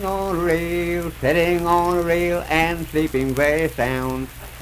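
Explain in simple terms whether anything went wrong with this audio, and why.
Nothing went wrong here: no audible faults anywhere in the recording.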